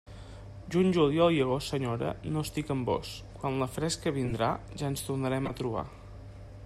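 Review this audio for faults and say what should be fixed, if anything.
Corrupt frame decoded at 1.64–1.69 s after "juliol i", 4.25–4.34 s after "vós quan la fresca", and 5.45–5.51 s. Damaged compressed frames played anyway, so a few frames each misplace energy into short noisy blips, peaking around -25, -20 and -15 dBFS. Prevent this by having the decoder check frame integrity and conceal damaged frames instead of playing them.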